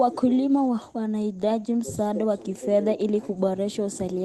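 From 1.25 to 2.17 s, scattered short gaps: about five dropped packets, up to roughly 10 ms each and about 40 ms in all, concealed by extending the preceding sound. They produce brief ticks and smears, and the concealment leaves the timeline about 13 ms longer. A spectrogram shows brief blurred or repeated slices, and the waveform shows tiny discontinuities. Through the call codec path, content above 12 kHz is missing.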